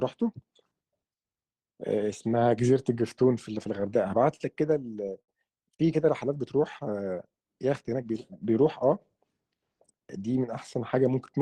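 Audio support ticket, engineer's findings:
Repeated stalls (stutter), 3.80–4.41 s. Speech catches five times, longest hold 39 ms, about 75 ms filled in total, roughly an eighth of that stretch. Jitter buffer keeps running dry as packets arrive late; receiver extends the last sound each time. Nothing dropped, just draggy.

Short stall from a late packet, 5.21–5.29 s. One held sound, 74 ms long, slight buzz or dip. Single packet turned up 74 ms late, buffer emptied, receiver stretched audio until it landed, then resumed cleanly. No content missing.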